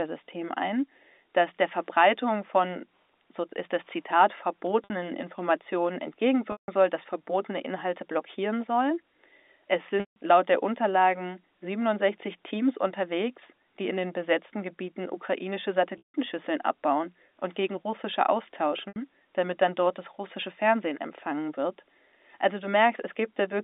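At 4.84 s, 6.52 s, 10.0 s, 15.98 s and 18.88 s the speech breaks up with packet loss with pitch repetition. The receiver loops the last pitch period to bridge gaps of 60, 160, 160, 160 and 80 ms. The short ones sound like a briefly held, buzzy note. The 160 ms gaps fade toward silence before "soll dass verbotene", "laut der" and "abbauen und gegen russische". A spectrogram shows flat, frozen harmonic stripes inside the telephone band, and the waveform shows identical repeating cycles tapering off.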